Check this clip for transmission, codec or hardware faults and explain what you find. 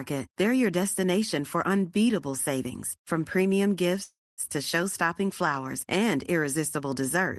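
One transmission fault is audible, a stall in the call stream.

Call audio freeze, 4.03 to 4.41 s, just after "unbeatable savings from premium". Delayed packets likely emptied the jitter buffer. The receiver extended the last sound as a fading buzz or hiss, then about 240 ms of silence. Speech resumes where it stopped, nothing lost, 343 ms later.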